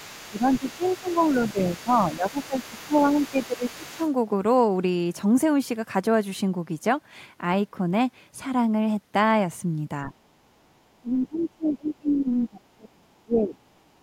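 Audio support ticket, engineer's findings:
Other side's voice leaking through, 0.0–4.13 s and again briefly at 11.38–11.46 s. A faint second voice sits under the talker, around 25 dB below the main speech. The likely cause is residual echo: far-end audio from the device loudspeaker reaches the microphone and the echo canceller leaves part of it in the send path.

Speech suppressed in double talk at 0.29–2.93 s, 3.31–3.99 s, 10.05–10.59 s, 10.99–13.58 s and 13.93–14.02 s. The talker's level dips in pieces while the far end is also active: around 15 dB down in the first two stretches, around 20 dB at 10 s, and as much as 30 dB in the last two. The likely component is the echo canceller's suppressor, which cannot separate near-end speech from echo and attenuates both.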